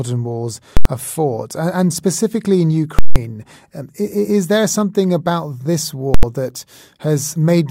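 At 0.77, 2.99 and 6.14 s, invalid numbers at full scale strike. A calculation produced infinite values that were pinned to maximum level. Loud pops mark each block's edges, with silence between. Two last 85 ms and one 170 ms, which fits 4096- and 8192-sample blocks.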